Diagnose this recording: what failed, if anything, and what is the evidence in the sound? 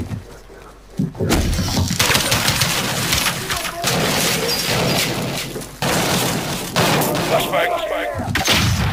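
The converter shows sample clock jitter throughout: a rough hiss that swells on loud, bright passages and disappears in silences. Unlike a fixed noise floor, it tracks the signal's slope, which fits timing errors of around 10 microseconds leaving the error only about 10 dB below the signal.

From 3.05 s to 8.23 s a doubled audio track runs: a full-band copy roughly 400 ms behind, about 5 dB quieter. Unlike an acoustic echo, it has no decay or room colouring and starts and stops abruptly, likely from a second, slower capture path.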